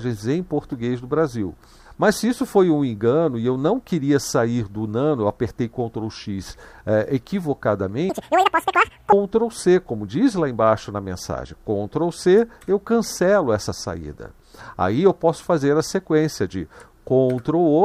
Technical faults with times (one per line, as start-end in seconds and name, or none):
8.10-9.12 audio read two samples at a time (double speed)